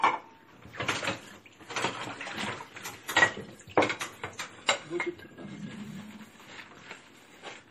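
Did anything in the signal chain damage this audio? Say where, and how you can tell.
Yes, at the codec stage, most likely MP3 compression throughout. Nothing remains above 15.1 kHz, and weak detail flickers with a watery swirl and smeared attacks, which fits a bitrate near 40 kbps. A plain low-pass filter would cut the treble cleanly, without that swirl.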